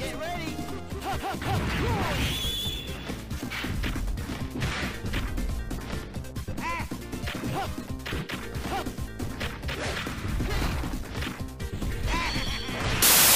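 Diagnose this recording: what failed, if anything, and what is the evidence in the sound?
The failure sits in sample-format conversion. From 13.02 s to 13.35 s the sound turns into loud, harsh broadband noise, which is samples built from the wrong bytes: the reader misassembles each sample, so fast-changing low bits become the dominant value.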